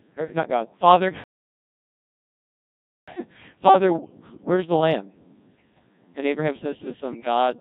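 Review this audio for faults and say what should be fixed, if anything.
Codec 2 vocoder, throughout: the speech is rebuilt from pitch, voicing, energy and a spectral envelope at 1.6 kbit/s, so it sounds heavily buzzy and robotic. Use a higher-rate waveform codec such as Opus wherever the link allows it.

Bit errors on digital voice radio, 0.44 to 0.48 s: a single corrupted frame, with around one and a half percent of bits flipped, briefly throws the synthetic voice's pitch and tone into a warbling blip. Improve signal margin or add stronger forward error correction for weak-coverage conditions.

Playback stall, 1.24 to 3.08 s: the output goes silent for 1.84 s mid-flow, then resumes, most likely because the player ran short of data or its thread was blocked. Enlarge the playback buffer and keep the audio thread free of blocking work.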